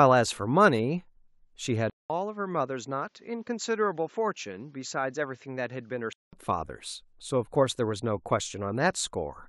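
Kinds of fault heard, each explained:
Input switched to a poorer device: at 1.9 s the speech cuts out for 200 ms, then returns a bit quieter and duller, with nothing above 7.6 kHz and a faint new background noise far beneath it, until 6.33 s. Likely the recording briefly jumped to a lesser microphone.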